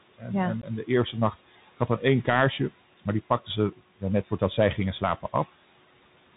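Noise suppressor artifacts run through the whole speech clip. The suppressor pulls the room noise, which sits about 19 dB below the speech, down by about 17 dB between phrases.

Bluetooth CVSD headset codec damage is also present throughout. The band stops at 4 kHz, and the one-bit delta coding, consistent with a 64 kbps link, leaves scratchy sibilants and a granular hiss.

Unconcealed Bluetooth headset packet loss occurs from 0.62 to 0.64 s. A couple of packets, about 15 ms of audio, were dropped without repair, leaving an abrupt hole.

Speech cut by the noise suppressor occurs from 4.24 to 4.58 s. The suppressor mistook parts of the speech for noise and lowered them by up to about 12 dB, about 100 ms in total, so they sound swallowed.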